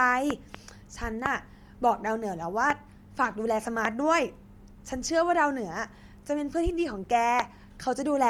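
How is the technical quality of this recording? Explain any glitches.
The recording is compromised by codec damage throughout and by repeated pops.

Bluetooth LC3 compression, likely, across the whole speech clip: low-bitrate coding in 10 ms frames, consistent with a 48 kbps stream, leaves a plainly audible grainy, breathy edge. Nothing sits above 20.1 kHz.

Loud pops, from a likely voltage step or static discharge: two pops between 0.30 and 0.57 s peaking about 15 dB above the speech, then single pops about 20 dB up at 1.26, 2.70, 3.85 and 7.40 s. Each is a sharp crack over the speech, which continues underneath.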